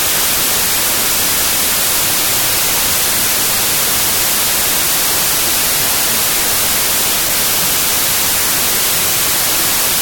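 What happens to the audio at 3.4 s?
At 3.4 s, as everywhere in the audio, a wrong sample width is at work: data stored as 32-bit integers are read as 16-bit, so each original sample is split into two. Many resulting values mix mismatched bytes, producing loud noise with the real signal buried inside, running at half speed and an octave low.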